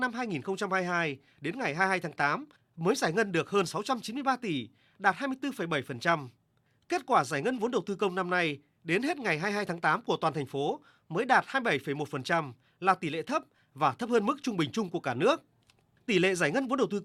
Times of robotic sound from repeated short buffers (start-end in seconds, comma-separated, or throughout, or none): none